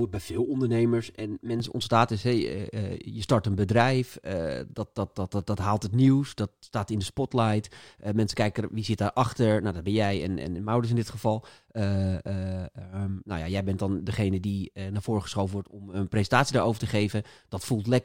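From 0.0 to 1.6 s, just before "ontstaat is hey", the speech sounds hollow from channel delay (comb filtering). One channel lags by about 3 ms, so the mono sum cancels at evenly spaced frequencies, the first near 150 Hz. Unlike flanging, the notches stay fixed.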